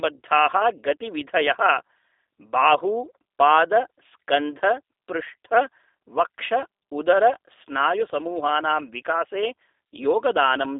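From start to finish the speech sounds thin, slightly rough and synthetic, with a buzzy, processed edge on every syllable and nothing at all above about 3.8 kHz. This is the G.729 codec at work, here the G.729A variant. It rebuilds the voice from a vocal-tract filter, a pitch predictor and a handful of pulses per frame rather than the original waveform. The narrow 300 Hz to 3.7 kHz telephone band and the plainly audible roughness point to an 8 kbit/s stream.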